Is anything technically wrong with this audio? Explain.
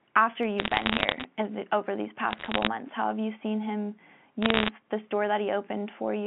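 Yes. Bit errors on a digital phone line crackle over the speech at 0.59–1.24 s (before "the over these"), 2.31–2.67 s (between "the over these" and "months how have you") and 4.42–4.69 s (after "have you seen him"). Flipped bits in the G.711 mu-law stream corrupt single samples, and hits on sign or high bits cause sharp ticks. These show as isolated one-sample spikes on the waveform and thin full-height vertical lines on the spectrogram, reaching up to 4 kHz.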